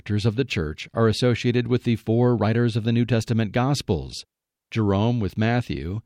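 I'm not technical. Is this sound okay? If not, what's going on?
Yes, nothing stood out as a problem when listening to this recording.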